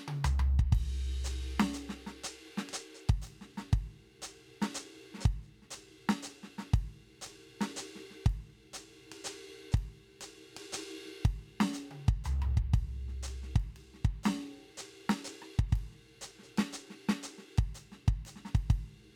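No technical faults can be heard anywhere in this music recording. There are no dropouts, glitches or other disturbances at any point in the clip.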